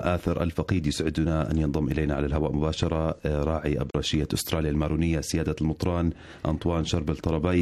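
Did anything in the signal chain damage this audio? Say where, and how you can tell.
Yes: AAC frame loss with muting at 3.90 to 3.95 s, a codec-stage fault. A brief 43 ms dip, fitting one zeroed frame faded by overlapping windows.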